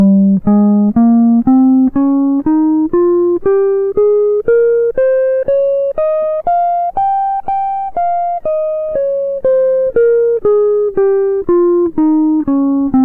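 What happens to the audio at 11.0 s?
Nothing goes wrong at 11.0 s; the music plays through that moment intact, with no dropout, click or distortion.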